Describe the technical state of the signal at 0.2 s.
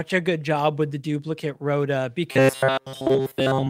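At 0.2 s the speech signal is intact, with no dropout, distortion, glitch or other audible fault at that moment.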